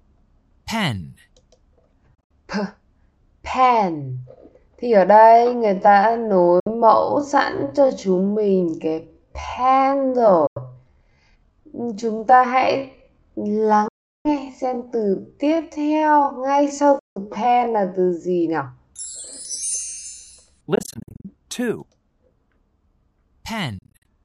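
At 2.15 s the first Bluetooth dropout hits: the sound cuts out in short holes, about 107 ms missing in all across roughly 150 ms, the longest gap 61 ms. That's most likely packets not reaching the headphones in time, so the output goes silent and then picks up further along, as if the audio had kept running underneath. It happens again at 6.60 s (61 ms), 10.47 s (91 ms), 13.88 s (366 ms), 16.99 s (168 ms), 20.75 s (about 244 ms lost in scattered bits over half a second) and 23.78 s (152 ms, also broken up).

From 5.10 s to 18.44 s there's a time-stretched section, slowed to about 0.57 times normal speed while the pitch holds steady. The pace drops abruptly at the start. That's likely software lengthening the audio by repeating short slices rather than resampling, which keeps the pitch where it was. Four of the dropouts land inside this slowed part.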